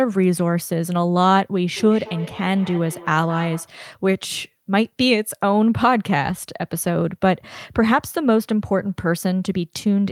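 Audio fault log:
1.76–3.79 s, feedback echo between two devices: the speech comes back at a steady interval of roughly 200 ms, peaking about 18 dB below the original. A second device in the room replays this microphone's signal, and neither echo canceller removes sound that the other device plays.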